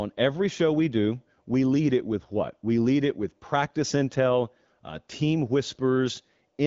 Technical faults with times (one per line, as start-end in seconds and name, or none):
none